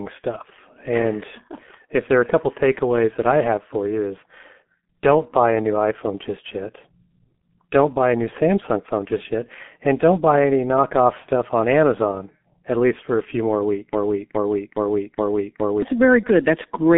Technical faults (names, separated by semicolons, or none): G.723.1 codec; broken-record loop